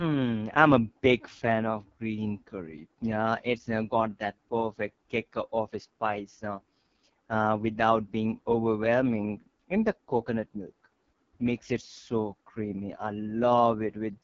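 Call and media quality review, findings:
AMR wideband (HD Voice) codec throughout: rough, raspy speech, which fits the lowest 6.6 kbit/s mode. Spectrogram: blurred harmonics, noise-filled 6.4–7 kHz band, nothing above 7.2 kHz.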